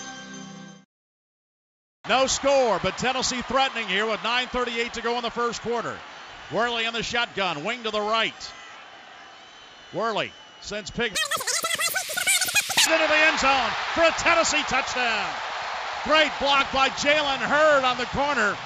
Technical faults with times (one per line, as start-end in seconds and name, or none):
11.15-12.87 wrong sample rate